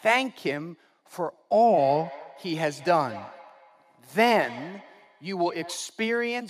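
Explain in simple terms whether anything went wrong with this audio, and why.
Feedback echo between two devices runs from 1.67 to 5.97 seconds: the speech comes back roughly every fifth of a second. Two devices on the same call share a room, one plays the other's sound, and that microphone picks it up again.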